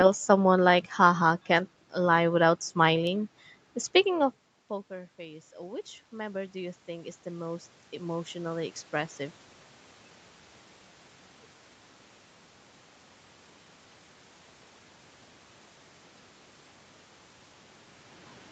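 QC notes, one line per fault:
4.15–9.20 s, automatic gain rising: the input drops by about 21 dB near 4 s as the talker moves away, and the gain control slowly adds about 12 dB, lifting speech and room noise together. On the waveform the envelope climbs, and the spectrogram's noise floor brightens.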